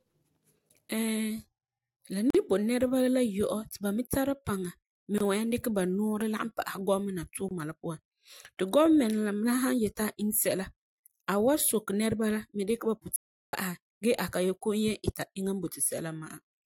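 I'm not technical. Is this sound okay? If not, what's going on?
No. There are three tiny gaps at joins of encoded pieces, at 2.30, 5.18 and 7.49 seconds, just before "nibo nɛreba la" and "la puan ti". Separately encoded chunks were joined with their built-in silence left in. Then, from 13.16 to 13.53 seconds, right after "nɛreba la dikɛ ba", there is an audio dropout to silence. The speech vanishes completely for about a third of a second, likely because the input briefly disconnected.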